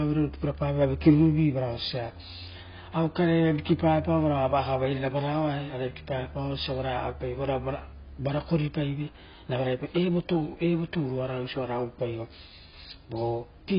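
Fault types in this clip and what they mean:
AAC compression: throughout, the speech is dull and smeared, with nothing above 5.1 kHz, pointing to likely AAC-LC coding at a low bitrate around 16 kbps.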